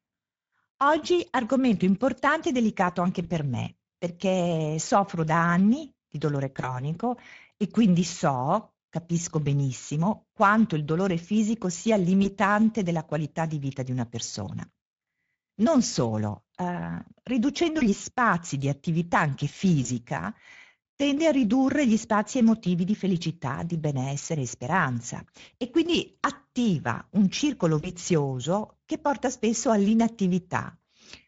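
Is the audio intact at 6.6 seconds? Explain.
No. From 6.61 to 6.82 s the speech shows VoIP packet loss concealed by the speech codec. The gap fits a single lost 20 ms frame. The decoder filled it by carrying forward its last pitch and spectral envelope with falling gain, so the sound smears into a brief, fading synthetic continuation. Because each decoded frame builds on the one before, the distortion lingers for tens of milliseconds or more before recovering. A plain dropout would leave silence or a click instead of this synthetic continuation.

Around that moment, as across the whole clip, the Speex codec damage is plainly audible. The sound has a hoarse, noisy grain, and the highs have a hissy, noise-like quality rather than real detail, which points to a middle quality setting. This CELP grain is steady and rasping, unlike the warbling, swirly artefacts of transform codecs such as MP3. 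It is also constant, whereas the concealment is confined to that short burst.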